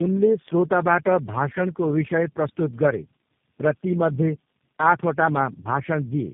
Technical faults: tandem speech coding

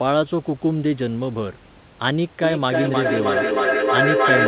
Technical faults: feedback echo between two devices

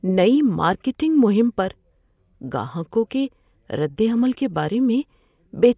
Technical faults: none

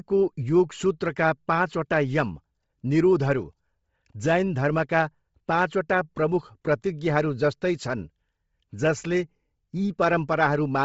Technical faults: Bluetooth LC3 compression

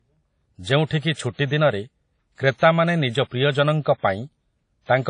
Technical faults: WMA compression; pre-echo

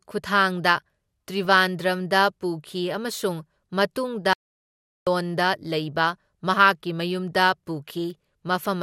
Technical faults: DAB burbling; audio dropout to silence

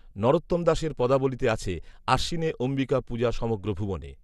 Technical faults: MP2 compression

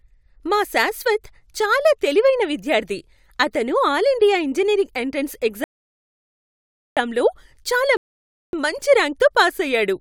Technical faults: rebuffering stall

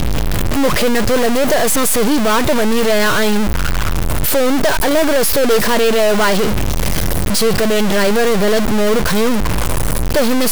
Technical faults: stuck bit

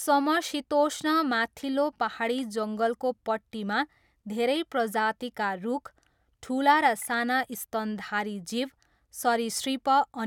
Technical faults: none

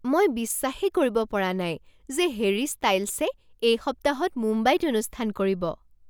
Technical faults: none

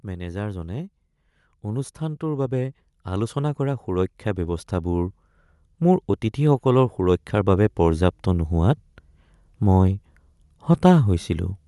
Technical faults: Bluetooth LC3 compression; automatic gain rising

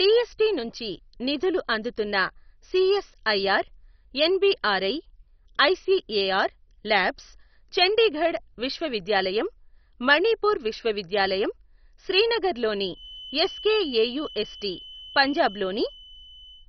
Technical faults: MP2 compression; feedback whistle

